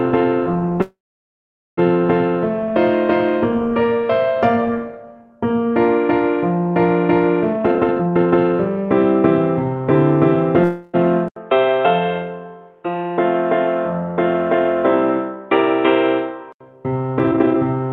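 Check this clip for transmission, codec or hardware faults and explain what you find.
Five faults appear: two call audio freezes, two jitter buffer speed-ups, and one stretch where the input drops to a poorer device. Around them, the call path's Opus coding limits the audio to about 12 kHz.

Call audio freeze, 0.81–1.79 s and 10.64–10.95 s: the jitter buffer likely ran dry while packets were held up, so the receiver stretched the last sound into a fading buzz. The first freeze sinks to silence for about 0.83 s. The second buzzes for its full 0.3 s. Nothing is lost, but each pause adds delay.

Jitter buffer speed-up, 7.53–8.83 s and 17.19–17.88 s: the receiver trimmed pitch-period slices to drain excess buffered audio. The first run plays at 165% speed and drops about a second. The second runs at 135% and drops roughly 0.3 s. Pitch is unchanged but the sound is hurried.

Input switched to a poorer device, 11.28–16.60 s: after an 80 ms silence, nothing remains above 3.8 kHz, giving a dull, boxy tone. 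A faint new noise floor appears about 50 dB down at roughly the same level, which most likely comes from a switch to a different input device. Full bandwidth returns at 16.60 s.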